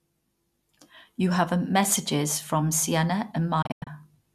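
A speech recording with a digital broadcast dropout between 3.62 and 3.87 s. The receiver lost the signal or rejected corrupt frames and muted, leaving about 168 ms of holes scattered over 240 ms. The longest gap is 96 ms, and each one fades out in about 8 ms. On a waveform these show as flat-lined gaps. On a spectrogram they appear as full-band blank columns with the speech missing, which fits roughly seven lost frames.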